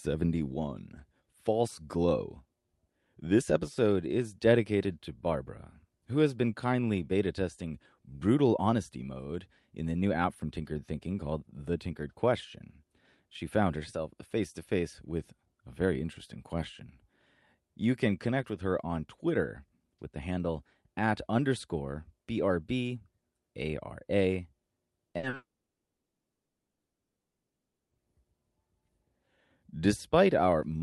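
At 25.11 s a short concealed packet loss lasting about 20 ms turns up in this speech. The receiver had nothing to decode for that moment, so it extended the preceding sound and blended back in. The result is a tiny smear or wobble rather than an audible gap, and the sound carries on. That is what separates it from the longer losses that follow, where the patch is long enough to hear.

From 25.17 to 25.25 s comes a burst of packet loss, about 60 ms in total. The concealment holds the last sound and turns it down across the gap, giving a brief buzz or hiss that fades before real audio resumes. Some content is skipped entirely. It is longer and more obviously fading than the single short loss.

A second short concealed packet loss of about 40 ms follows at 25.29 to 25.35 s, another quick smear that leads straight into the longest fault.

From 25.35 to 27.96 s the audio drops out for about 2.6 s. 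A fading continuation lasts only a moment, then near-silence holds for about 2.5 s before sound returns further along. This was likely a long network dropout. The tell against a burst is that the concealment gives up and leaves silence instead of a sustained buzz. All of this passes through a call codec whose top end stops near 12 kHz, which fits Opus.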